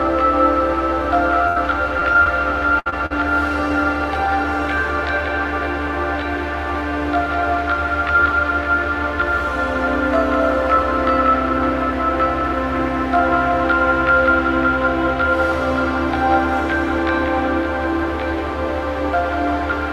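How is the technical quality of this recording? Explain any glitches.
The recording is marred by a cluster of network dropouts between about 1.5 and 3.1 s, of two kinds.

The first kind, a burst of packet loss, occurs at 1.47 to 1.58 s and at 2.79 to 2.88 s. About 80 ms and then 60 ms of audio never arrived. The receiver stretched the last sound to cover each hole and turned it down as it went, giving a held buzz or a fading hiss. The audio then jumps ahead, and the lost stretch is simply gone. That skip forward is what sets these apart from the shorter dropouts.

The second kind, short concealed packet loss, occurs at 2.00 to 2.18 s, 2.13 to 2.17 s, 2.24 to 2.27 s, 2.90 to 2.94 s and 3.06 to 3.12 s. Each gap was 20 ms, apart from a 40 ms gap at 3.06 s. The decoder filled each gap from the preceding pitch or with shaped noise, then blended back into the real signal. These are heard as a brief smear or wobble rather than a fade and jump. 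The first event also adds roughly 10 ms of delay, so the timing there stretches slightly.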